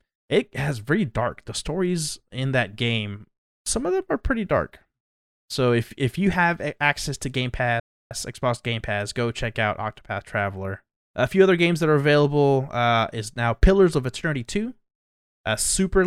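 It's a speech clip with one playback stall: at 7.80 s the audio just drops out for about 310 ms, then picks back up at 8.11 s, likely the player starving for data or its thread getting blocked.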